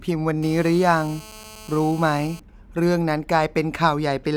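A nearby 2G phone on a call pulses its transmitter 217 times a second, and the audio circuit rectifies it: a steady, raspy GSM buzz, about 22 dB under the speech, from 0.43 to 2.40 s.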